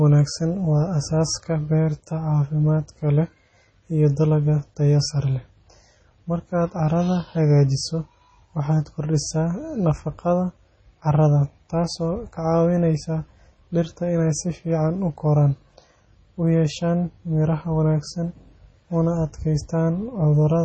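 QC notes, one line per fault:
Throughout: heavy MP3 compression, likely from a low-bitrate encode; the damage fits something around 24 kbps. Nothing reaches above 8.3 kHz, so the speech has lost its top end and the s sounds come across dull. Starved for bits, the encoder has zeroed the weaker frequency lines, and they switch on and off from frame to frame, which gives the watery, swirly texture you hear, with metallic chirps on sibilants and smeared attacks.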